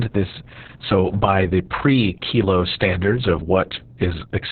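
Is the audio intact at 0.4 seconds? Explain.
No. Opus voice compression runs throughout, coding this speech with SILK in narrowband, so everything above 4 kHz is gone. Its hoarse, robotic roughness, which fits a bitrate near 6 kbps, separates it from plain low-pass filtering.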